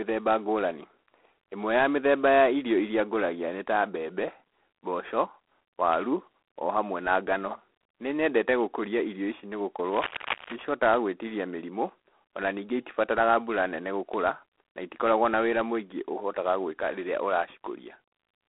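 Speech runs through G.726 ADPCM at 24 kbit/s for its whole length. Coding each sample as a coarse difference from a prediction leaves a harsh, rasping hiss that rises and falls with the speech. The band is telephone-narrow, and nothing passes above 3.9 kHz. From 9.89 to 10.62 s, right after "nyendete gũkũria irio ici", cable scratch noise breaks in. Dense, uneven bursts of scratching sit about 10 dB below the speech. A worn cable or connector being moved is the likely cause.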